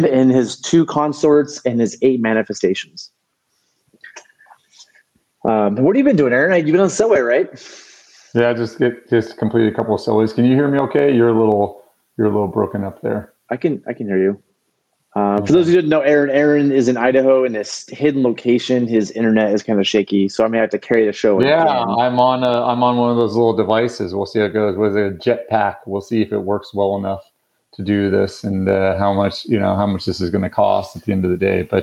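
Gain pumping runs through the whole clip, with the gain swinging by roughly 10 dB. The likely cause is gain set far too high, with a fast limiter clamping every peak and squashing the dynamics.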